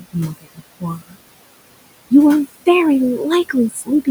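Noise suppressor artifacts run through the whole clip. The suppressor pulls steady background down by about 20 dB, so the room noise, sitting about 16 dB under the speech, dips in the gaps and comes back underneath the talking.

Speech cut by the noise suppressor shows up three times. From 0.38 to 0.61 s and again from 0.99 to 1.16 s, roughly a tenth of a second of speech in each span gets mistaken for noise and pushed down by about 19 and 20 dB. From 3.7 to 3.89 s, around a fifth of a second drops by about 16 dB. Those bits sound swallowed and faint.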